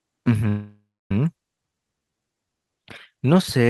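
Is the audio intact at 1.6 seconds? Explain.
No. At about 1.56 s there is a skip ahead: the jitter buffer had already queued later audio, so roughly a fifth of a second of speech was thrown away and playback jumped straight across it, joined by only a 7 ms fill, leaving an abrupt, clipped-sounding splice.

Straight after, from 1.63 to 3.27 s, comes a jitter buffer slow-down: now short of reserve, the receiver stretched the speech by repeating single pitch periods and pause fragments, adding 229 ms. Speech plays at 87% speed with unchanged pitch, sounding drawn out.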